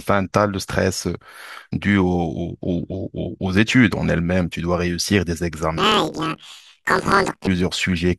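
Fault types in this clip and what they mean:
Planar audio read as interleaved: From 5.77 to 7.49 s the speech jumps an octave higher and takes on a rapid flutter at about 38 Hz, while its overall pace stays normal. Each 26.12 ms block stores all left-channel samples followed by all right-channel samples, but it is being read as alternating left-right pairs. Each channel's half of the block therefore plays back compressed at double speed, one after the other.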